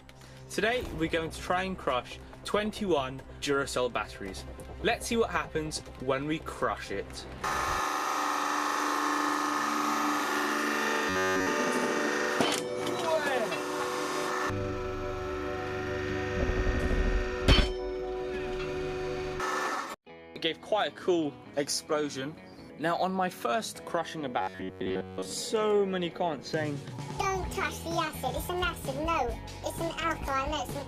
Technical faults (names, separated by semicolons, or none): robotic sound from repeated short buffers